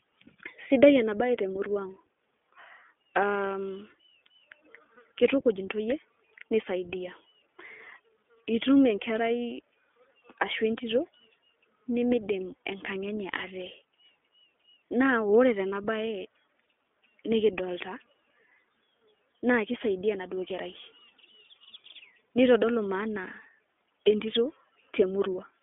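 Throughout the speech, the iLBC codec is plainly audible: each 20 ms frame is coded on its own, leaving a rough, slightly synthetic edge. The line passes roughly 250 Hz to 3.5 kHz, with nothing above 3.7 kHz, a rate that fits 15.2 kbps iLBC.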